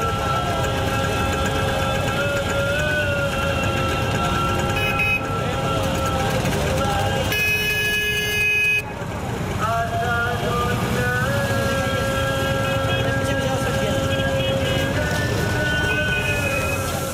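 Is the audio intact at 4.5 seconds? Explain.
Yes, the audio is intact at 4.5 seconds, with no fault audible at that moment.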